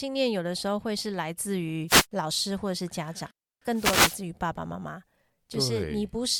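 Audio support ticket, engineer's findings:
Wireless microphone noise hits, 1.87–2.06 s and 3.72–4.23 s: short static swishes, the second longer at about 0.5 s. Analogue FM radio link fading as multipath reflections cancel at the receiver; noise floor surges through. Check antenna placement and diversity.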